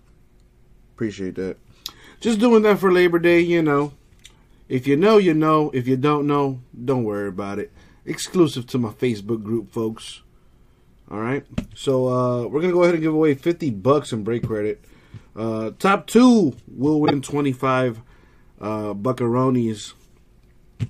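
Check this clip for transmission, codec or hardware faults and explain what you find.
One fault turns up: frames out of order, from 17.05 to 17.13 s. Two neighbouring blocks of coded audio were delivered swapped and the decoder played them as received, so the later block sounds before the earlier one. Each swapped piece lasts about 26.1 ms, which fits a single decoded frame apiece. The result is a brief garbled flutter. The timing stays intact, since nothing is dropped.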